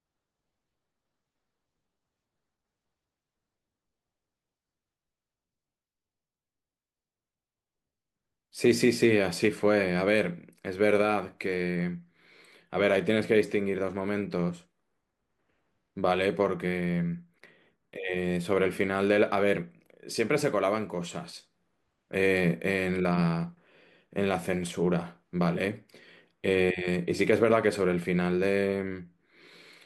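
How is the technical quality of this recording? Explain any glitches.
No technical glitches can be heard anywhere in the speech recording; the signal stays continuous and stable throughout.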